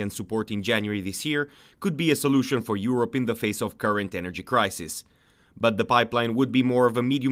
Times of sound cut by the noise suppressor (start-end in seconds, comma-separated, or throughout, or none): none